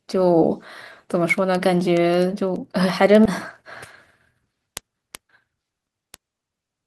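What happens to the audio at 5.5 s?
A jitter buffer speed-up spans 4.31 to 6.65 s. Repeated pitch-period cuts drop about 0.4 s. Speech runs 19% faster, same pitch, sounding hurried.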